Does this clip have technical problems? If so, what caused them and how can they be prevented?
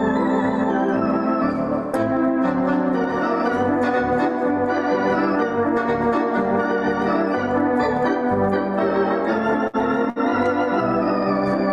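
Yes. A burst of packet loss at 9.67 to 9.76 s and again at 10.10 to 10.19 s: the receiver holds and fades the last sound for about 60 ms each time, skipping about 60 ms of audio. Preventing it requires a steadier network link or forward error correction, with a slightly deeper jitter buffer.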